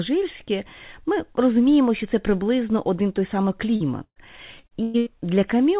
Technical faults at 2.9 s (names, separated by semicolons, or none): none